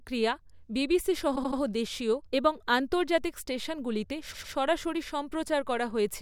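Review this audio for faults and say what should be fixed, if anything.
Repeated frames cause stutters in this speech at 1.35–1.58 s, just after "বিবিসি সহ", and at 4.33–4.53 s, after "দেশীয় এবং আন্তর্জাতিক স্টেশনগুলিতে". In the first, a 78 ms block plays three extra times, which fits a run of three compressed frames, adding 235 ms. In the second, a 105 ms block repeats twice, adding 209 ms. Prevent this by deduplicating frames on write or receipt using sequence numbers or timestamps.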